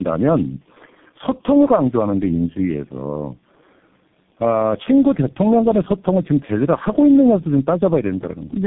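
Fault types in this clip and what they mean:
Tandem speech coding: The speech sounds rough, muffled and warbly, with nothing above about 3.9 kHz. This fits three low-rate speech codecs in a row, such as GSM full rate, G.729A and G.723.1. Each decoded and re-encoded the previous coder's degraded output, so the damage stacked.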